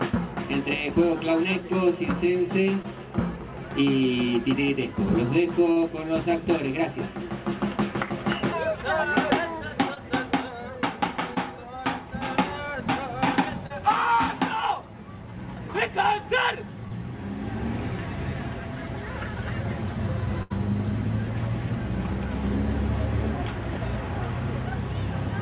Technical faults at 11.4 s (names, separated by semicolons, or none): short concealed packet loss